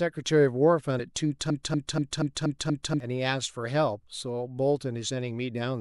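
A speech clip with two technical faults. At 0.98 s, compressed frames are skipped. A single frame of about 26.1 ms, roughly 30 ms of audio, is never played. The sound jumps forward. From 1.50 to 3.00 s, a broken-record loop takes over. A 0.24 s fragment plays six times back to back. The audio meant for that stretch is lost. The likely cause is a stalled player, encoder or stream resending its last fragment.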